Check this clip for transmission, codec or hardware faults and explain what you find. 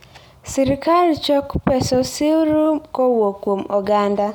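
Nothing stood out on listening; the speech comes across without any audible problem at any point.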